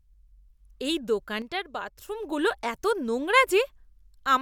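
A likely one channel drops out of the stereo pair from 1.42 to 2.08 s, so the mono sum loses half its contribution for that stretch. The speech falls abruptly by about 6 dB, then returns to full level just as suddenly.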